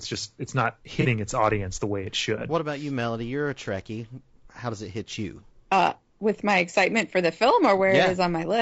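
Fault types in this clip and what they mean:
Low-delay AAC compression: The speech was most likely coded with a low-delay AAC such as AAC-ELD at a low rate, consistent with around 32 kbps. The low bitrate leaves too few bits to separate the pitch harmonics cleanly. Throughout the clip the voice sounds plainly rough and grainy, with a noisy haze filling the gaps between harmonics and a thin, somewhat artificial quality in the highest frequencies.
AAC frame loss with concealment: A block of coded audio went missing and the decoder filled the gap by reusing and reshaping the spectrum of the preceding good frame rather than decoding real data. Between 1.01 and 1.06 s, just after "just it's not" and before "its audience the way", this leaves a brief smeared, noisy patch, lasting well under a tenth of a second, where the sound loses definition before clean decoding resumes.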